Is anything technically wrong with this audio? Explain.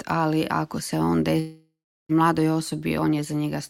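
Yes, there's a long network dropout from about 1.39 to 2.11 s. The last sound gets stretched into a fading buzz, then about 0.36 s of near-silence, and the audio resumes with roughly 0.7 s simply gone, likely from packets never arriving.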